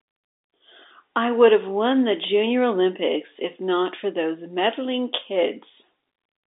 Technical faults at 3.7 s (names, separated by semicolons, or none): none